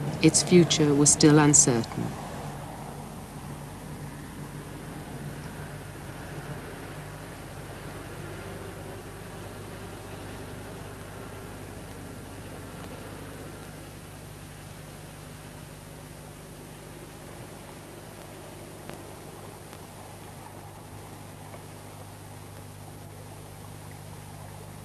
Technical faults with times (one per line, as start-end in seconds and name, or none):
none